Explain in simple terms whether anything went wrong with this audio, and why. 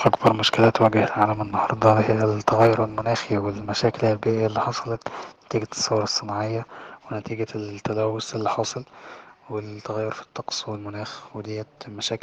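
The microphone's input was most likely set too high at the start. The loudest parts of the speech pushed past the top of what the recording could hold, so their peaks were sliced flat. That is microphone overload, and you hear it as a rough, crackly edge on the voice from 0.06 to 0.87 s, and again, more briefly, from 2.48 to 2.67 s. A small share of the sound was cut off each time.

The call software then seems to have reacted to that distortion by turning the microphone's volume down in a single step. This is microphone volume stepped down. It happens at about 0.28 s, partway through the first crackly stretch, and again at 2.67 s, right as the second one ends. Each time, the voice and the background noise around it suddenly get quieter together, and the second drop is the larger of the two.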